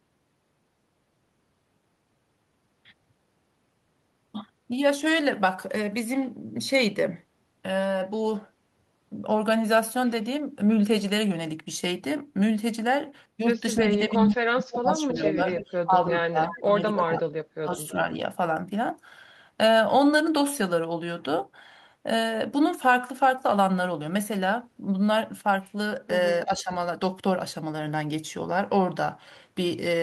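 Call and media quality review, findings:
Speech suppressed in double talk at 13.79–17.29 s (about 2 s dipped in total), 17.62–18.19 s and 26.46–26.72 s. Level drops of up to about 25 dB, about 10 dB at 26.5 s. Likely echo canceller attenuating the near talker while the far side is active.

Echo leak at 15.13–15.65 s, 16.43–16.61 s, 16.97–17.05 s and 26.44–26.63 s. Delayed copy of the speech at 318 ms, about 10 to 20 dB below it, in short scraps. Likely far-end speakerphone echo canceller passing residual loudspeaker pickup.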